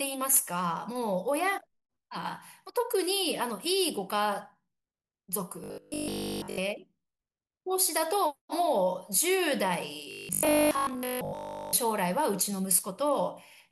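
From 5.64 to 6.58 s, and again from 10.11 to 11.73 s, the speech turns into a rigid, metallic 50 Hz buzz. This is robotic sound from repeated short buffers. Almost everything heard is repeated. The likely cause is one 20 ms stretch being looped while fresh audio failed to arrive.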